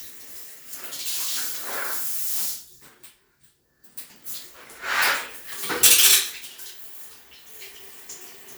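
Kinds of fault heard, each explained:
No technical fault can be heard anywhere in this recording of sounds. Nothing in it calls for a fault to be named or explained.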